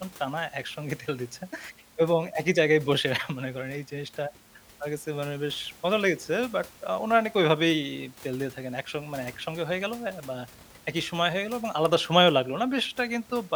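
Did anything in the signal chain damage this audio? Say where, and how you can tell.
No, nothing in the chain has marked this speech, and the only thing under it is the room's own background noise, sitting about 25 dB below the voice, which belongs to the recording rather than to any stage after the microphone.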